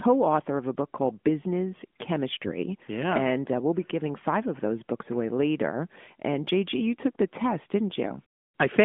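Around 2.46 to 2.54 s the speech suddenly goes hoarse and gargly for a moment. That's AMR bit errors: a few percent of the less protected bits got flipped while the checks on the key bits still passed. The pulse positions and the fine pitch, gain and spectral values come out wrong, roughly four frames' worth by the length. Under it is a lightly coded AMR narrowband line, about 200 Hz to 3.5 kHz, running at 12.2 kbps.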